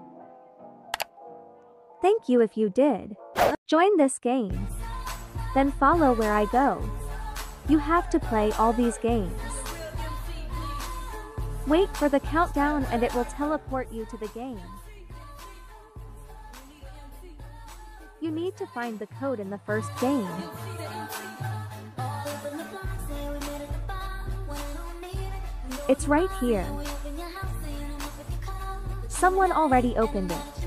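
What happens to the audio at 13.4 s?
At 13.4 s the level is falling in coarse, unsmoothed steps, zipper noise from 12.87 to 14.21 s: a drop of around 10 dB taken at roughly fifteen steps a second. Each jump ticks audibly; a waveform shows a staircase envelope, a spectrogram faint evenly spaced vertical lines.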